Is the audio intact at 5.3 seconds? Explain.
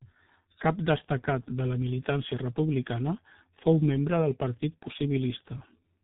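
No. At 5.3 s, as throughout, the G.723.1 codec passes nothing above 3.8 kHz, and its low bitrate, around 6 kbit/s, and 30 ms frames leave muffled, hoarse speech with blurred consonants.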